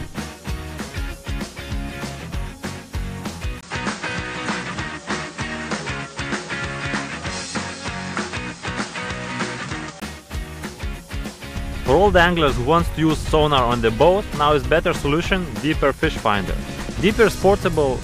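From 3.61 s to 10.02 s the audio turns duller and boxier, with nothing above 9 kHz, a level shift of about 5 dB, and a faint new background noise roughly 30 dB below the signal. A brief silence of about 20 ms marks the change at 3.61 s, and the fuller sound returns at 10.02 s. The likely cause is the input switched to a poorer device, whose narrower band, different gain and own noise floor replace the original microphone for that stretch.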